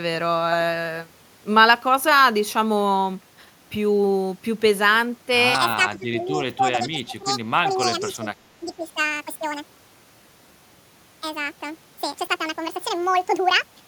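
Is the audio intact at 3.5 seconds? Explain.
Yes, the audio is intact at 3.5 seconds, with no fault to be heard at that moment.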